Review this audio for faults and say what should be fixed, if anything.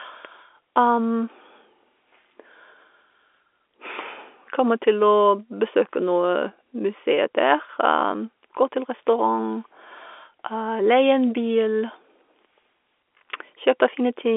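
Nothing in the recording needs fixing. The speech has passed through G.711 telephone coding, so it sits within a narrow line band of about 300 Hz to 3.5 kHz, as expected for that path.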